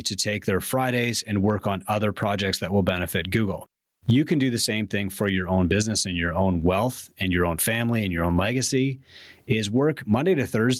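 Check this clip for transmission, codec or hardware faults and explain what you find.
There's one fault here, and it runs the whole length of the speech: gain pumping. Between phrases the gain swells up, then ducks each time the talker gets loud, with a level swing of around 20 dB. The likely cause is input gain set way too hot for the mic, with a fast limiter or compressor clamping down on every peak. So loud and quiet parts sit squashed together.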